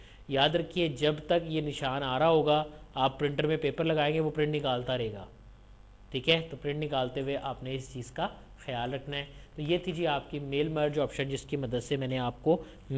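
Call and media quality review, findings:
No faults found.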